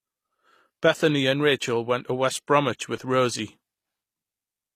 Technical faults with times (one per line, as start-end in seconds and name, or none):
0.00-4.75 HE-AAC compression